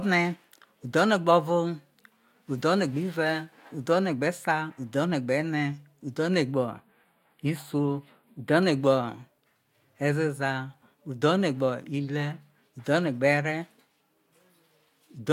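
The clip is speech, and from 6.54 s to 8.63 s it takes on a hollow, phasey colouring with fixed notches, the signature of channel delay (comb filtering). One channel of the original pair arrives a few samples late, around 0.07 ms, and when the two are summed to mono the shared content cancels at evenly spaced frequencies. The first notch sits near 7 kHz, and the delay fits a lag of about four samples.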